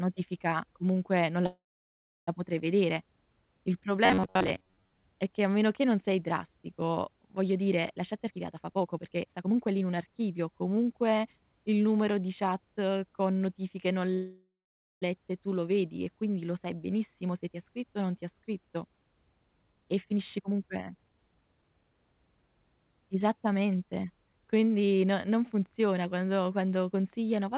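Italian speech over a call line, band-limited at 4 kHz in the way of a G.711 mu-law path. Two call audio freezes interrupt it. At 1.46 to 2.29 s, after "comunque non", the sound smears into a fading buzz, then about 0.69 s of silence. Speech resumes at "potrei vedere" with nothing lost, just 0.81 s later. The second freeze runs from 14.14 to 15.04 s. It adds 0.88 s, with about 0.52 s of it silent. Likely cause: delayed packets that let the jitter buffer run dry. From 4.05 to 5.07 s there is robotic sound from repeated short buffers. The speech becomes a stiff, metallic buzz at 93.8 Hz, while roughly half the real audio is skipped. That pitch fits a repeated piece about 10.7 ms long. The likely cause is audio arriving too seldom, with the last buffer replayed to fill gaps. Jitter buffer speed-up appears three times. From 8.01 to 10.93 s, after "drastico voglio dire la", speech runs at 128% speed. 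About 0.7 s is trimmed, and it sounds hurried at normal pitch. A brief one at 17.11 to 17.51 s, between "e quindi lo sai" and "ti ha scritto o", runs at 111%. From 19.72 to 22.28 s it runs at 132%, again trimming about 0.7 s. Each time, short pitch-period pieces are removed to drain excess buffered delay.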